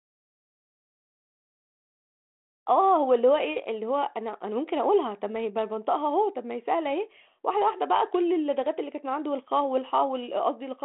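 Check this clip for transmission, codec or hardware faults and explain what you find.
No transmission, codec or hardware faults turn up in this clip.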